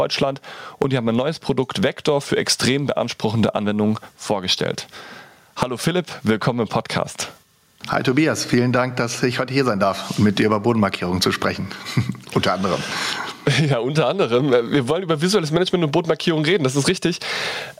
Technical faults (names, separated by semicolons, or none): gain pumping